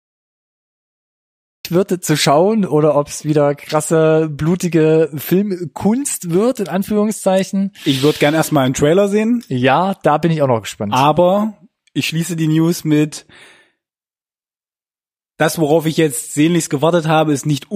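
The speech opens with digital silence until 1.65 s, a cut-off start: capture began late, so audio jumps in mid-sound before "wird zu schauen oder", showing a flat line then a vertical wall.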